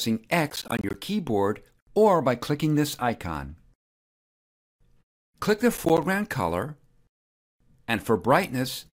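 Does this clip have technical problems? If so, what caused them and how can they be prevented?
Yes. Processor overload crackle appears from 0.50 to 0.94 s and again from 5.77 to 6.03 s. The processor missed a run of buffer deadlines, and each late buffer came out as a brief hole of silence with hard edges. The gaps are spaced at intervals that fit buffers of around 10 ms, a dozen or more in the first burst and a handful in the second, so they merge into gritty tearing. It can be prevented by enlarging the buffer or cutting the processing load during recording.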